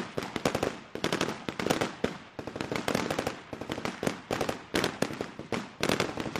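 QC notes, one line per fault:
1.72–1.77 s and 4.69–4.74 s, damaged data in a compressed stream: corrupted bytes make the decoder misread frames and lose sync, so each spot becomes a short glitch lasting under 50 ms.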